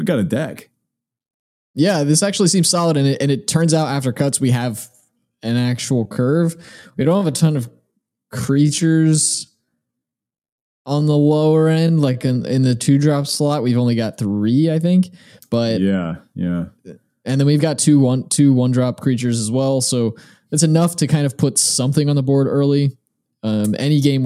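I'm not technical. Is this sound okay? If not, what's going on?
No. From 4.85 to 13.49 s, speech drags at about two-thirds pace. The pitch doesn't drop the way plain slow playback would, so this is likely a time-stretched section.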